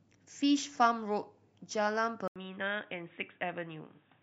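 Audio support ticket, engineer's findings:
At 2.28 s, an 80 ms dropout, then speech turns dull and boxy through to the end; nothing above 3.8 kHz. Likely cause: input switched to a poorer device, a narrowband mic or headset call profile. Spectrogram shows a hard ceiling at 3.8 kHz and a new steady noise floor roughly 40 dB under the speech. Waveform shows a brief flat gap at the switch, with no clear level jump.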